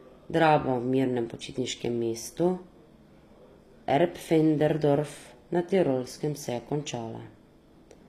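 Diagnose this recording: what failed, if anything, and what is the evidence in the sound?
The failure sits at the codec stage and runs through the whole speech clip. The top end is synthetic: sibilants come out gritty and metallic, and nothing is present above 15.5 kHz. That points to HE-AAC compression, likely HE-AAC v2 at a low rate around 24 kbps. Only the lower spectrum is truly coded. The treble is rebuilt by copying lower bands upward under a coarse envelope, so its harmonics no longer line up with the real ones.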